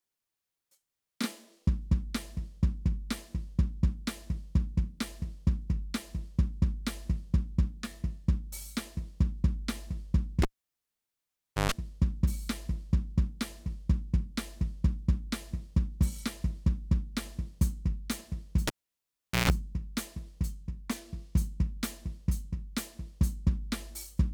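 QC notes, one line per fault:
10.42–11.72 s, cable pulled and plugged in: pop as the live lead disconnects, 1.24 s near silence, then 130 ms of 50 Hz mains buzz while only the ungrounded tip touches, and a pop as the music returns.
18.67–19.50 s, cable pulled and plugged in: disconnection pop, 0.77 s near silence, 140 ms of 60 Hz mains buzz picked up by the bare tip, then a reconnection pop.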